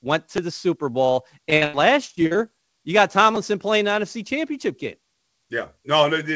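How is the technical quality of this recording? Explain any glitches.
The recording has two kinds of dropout problems, a buffer stutter that shows up twice and one stretch of choppy packet loss. It also came through a G.722 call path, so nothing sits above 8 kHz.

Repeated buffer, at 0.37 s and again at 3.36 s (between "you got" and "playing the"): fresh audio didn't show up in time, so the player looped the last tiny chunk a few times. Each loop is so short, which fits a 5 ms buffer, that it comes across as a quick click or buzz rather than an audible stutter.

Repeated packet loss (robotic sound), from 1.50 to 2.50 s, ending just before "you got": packets kept going missing, and each hole got patched by stretching the previous sound. The longest hole is about 82 ms and roughly a third of that second is filled-in audio, giving a choppy feel with bits dropped.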